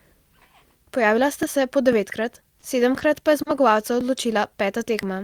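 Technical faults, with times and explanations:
0.43 s to the end: periodic USB or driver dropouts. Something on the USB bus or in the audio driver stalls the stream every 0.5 s, and each time a sliver of audio is skipped outright. The result is a steady train of ticks, audible only while speech is sounding.
2.60–2.65 s, 2.98–3.03 s, 3.42–3.49 s: short stalls from late packets. Each time a packet arrived late, the jitter buffer emptied and the receiver held the last sound for 20, 20 and 40 ms before resuming where it left off. No speech is lost, but each hold drags a sound out with a faint buzz or dip, and the delay grows by the same amount.
4.50–5.14 s: jitter buffer slow-down. To build up a reserve, the buffer repeated single pitch periods or bits of pauses again and again, adding 40 ms over this stretch. Speech plays at about 95% speed at unchanged pitch, so sounds are drawn out.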